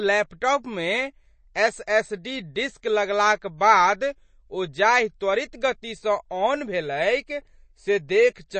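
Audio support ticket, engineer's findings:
MP3 compression, throughout. Speech is clearly watery and swirly, with metallic chirps on s sounds and nothing above 8.3 kHz. Likely a bit-starved MP3 encoder at about 32 kbps: treble cut at a fixed frequency, weak frequency lines flickering between frames, attacks smeared.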